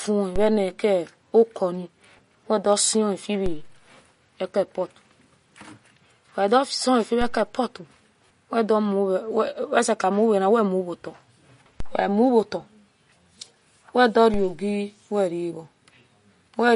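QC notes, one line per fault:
Throughout: MP3 compression. The encoder likely ran short of bits, at a rate that fits about 40 kbps. It zeroes weak frequency lines that flicker between frames and removes everything above 10.6 kHz, giving plainly audible watery, swirly speech, smeared attacks and dulled treble.
0.36, 3.46, 11.80 and 14.34 s: DC step. At each point the waveform's zero line jumps suddenly, then the offset decays away, as a 2 Hz high-pass would pull it back. Each jump is heard as a low thump or click while the speech carries on unchanged.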